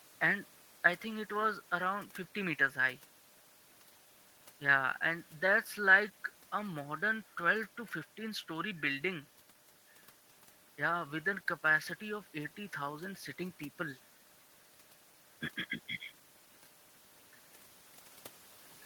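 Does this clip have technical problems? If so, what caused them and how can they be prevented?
No, the signal shows no technical faults anywhere in the recording, so there is nothing that needs preventing.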